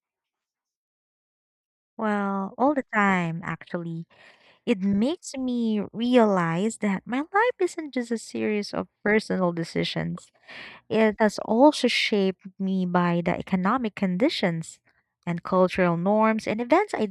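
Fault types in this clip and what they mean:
No faults can be heard anywhere in this recording.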